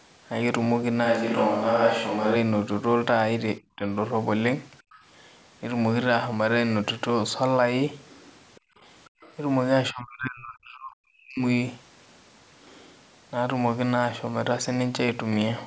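Switch to a distant microphone, 1.07 to 2.34 s: the speech turns roomy and hollow at about the same loudness, with room noise roughly 30 dB below it, likely because the close microphone dropped out and a farther one took over.

Speech suppressed in double talk, 3.60 to 3.86 s: the voice dips by around 15 dB in brief pieces, likely an echo canceller ducking the talker while the other side was also speaking.

Other side's voice leaking through, 4.92 to 5.02 s: a faint second voice appears, roughly 30 dB under the speech, likely loudspeaker playback the echo canceller failed to fully remove.

Other side's voice leaking through, 8.55 to 8.60 s: a very faint trace of the second voice appears, around 35 dB below the speech.

Background gated by the echo canceller, 8.60 to 8.80 s: the room sound drops by about 28 dB as the canceller clamps the microphone during playback, then recovers.

Other side's voice leaking through, 9.05 to 9.34 s: the second voice returns, roughly 30 dB under the speech.

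Background gated by the echo canceller, 9.09 to 9.21 s: within that leak, the background sinks by about 38 dB.

Speech suppressed in double talk, 9.92 to 11.42 s: the talker is pushed down by roughly 40 dB and breaks up for a second and a half. The band-limited sound, with nothing above 8 kHz, comes from the call's normal microphone processing.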